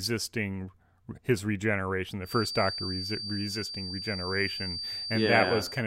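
Speech. After "his regeneration", from 2.21 s to the end, a 4.6 kHz feedback whistle that slowly swells and fades sits roughly 10 dB under the speech. Its likely cause is a loudspeaker-to-microphone loop held near the feedback point.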